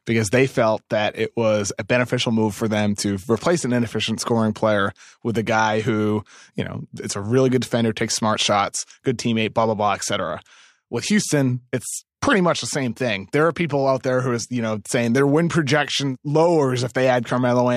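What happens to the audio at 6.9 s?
At 6.9 s the speech carries on intact, with no fault audible at that moment.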